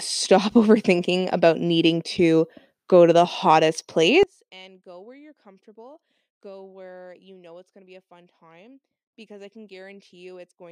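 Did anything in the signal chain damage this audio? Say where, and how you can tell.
Yes. From 4.23 s, after "go to the hottest", the speech drops about 27 dB to the end: likely one channel inverted in the analogue wiring, so centred sound cancels when summed to mono.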